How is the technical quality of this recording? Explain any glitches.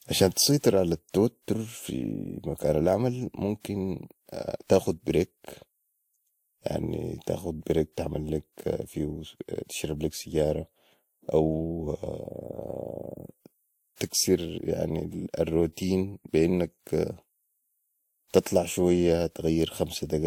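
Throughout the speech, two layers of codec artefacts sit on top of each other, with nothing above 16.6 kHz. It sounds like transcoding between lossy codecs, likely a Vorbis encode re-encoded to WMA 1, with each stage adding its own artefacts.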